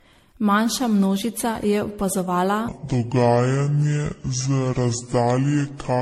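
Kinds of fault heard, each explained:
generation loss: The whole recording sounds swirly, smeared and hollow, with blurred consonant attacks, beyond what a single 64 kbit/s MP3 encode would leave. This is likely generation loss from decoding and re-encoding through MP3 around seven times. Each pass quantises again on a shifted frame grid, so the noise and the spectral holes stack up rather than staying at one encode's level.
section at the wrong speed: From 2.68 s, right after "množica je opazovala", to the end of the clip, the speech plays at 0.643 times its original speed. Pitch and tempo drop together, so the voice turns deep and slow, roughly seven semitones lower, and the change happens abruptly rather than gradually. This likely comes from that stretch being played back or conformed against the wrong clock, which shifts pitch and duration in the same proportion.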